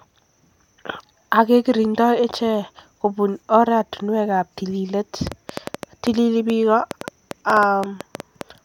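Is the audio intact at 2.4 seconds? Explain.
Yes, the speech is intact at 2.4 seconds, with no dropout, click, distortion or other fault audible at that point.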